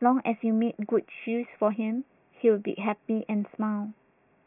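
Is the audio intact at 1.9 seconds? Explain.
Yes, the speech at 1.9 seconds plays through intact, with no dropout, click, distortion or other fault at that moment.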